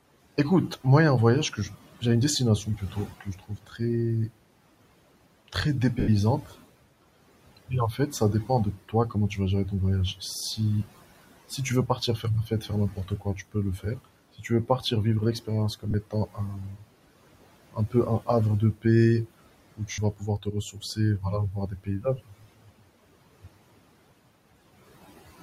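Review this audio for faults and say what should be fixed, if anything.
The noise suppressor is working hard throughout. It pulls the background down by about 18 dB, so the room noise, which sits about 19 dB under the speech, dips away in the gaps and comes back up underneath each phrase, from the band-by-band gain riding frame to frame. To prevent it, ease the suppression depth or smooth its gain over time.

There is speech cut by the noise suppressor in six stretches: 1.5 to 2.03 s, 2.64 to 4.31 s, 7.57 to 10.86 s, 11.5 to 14.84 s, 15.4 to 16.85 s and 17.72 to 22.83 s. Quiet consonants and word tails are judged to be noise and pushed down along with the background, by as much as about 19 dB, so they sound swallowed. The total is about 1.5 s in the 17.72 s stretch, and under a second in each of the others. To prevent it, raise the speech-presence protection or lower the suppressor's aggressiveness.

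Lost LE Audio frames show up at 6.0 s for 80 ms, at 15.91 s for 30 ms, and at 19.92 s for 60 ms. The LC3 decoder fills each hole by reusing the last spectrum with scrambled phase. You hear a brief noisy smear in place of the tonal content, and on the 80 ms one it starts fading toward silence. That length fits roughly eight 10 ms frames going missing in a row. To prevent it, improve the Bluetooth link margin or add retransmission headroom.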